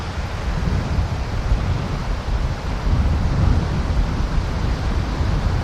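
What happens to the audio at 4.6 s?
Nothing goes wrong at 4.6 s; the sound carries straight through that moment with no dropout, click, distortion or other fault.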